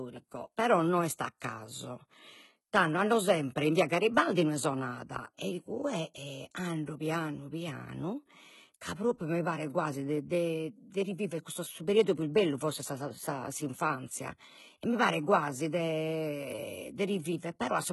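HE-AAC compression runs throughout the speech, with heavy damage and nothing above 11.8 kHz. The treble sounds synthetic, likely from spectral band replication copying lower bands upward under a coarse envelope, so s sounds turn gritty and metallic. This fits a bitrate near 16 kbps.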